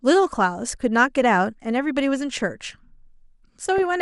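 Throughout, MP2 compression likely gave each sub-band too few bits, fitting a rate near 80 kbps; upper bands drop out, leaving the speech dull, gurgling and granular. From 3.78 to 3.82 s, bit errors slip past error correction, causing DAB burbling: short blips of noise hit single sub-bands across 6 frames, giving a brief burble.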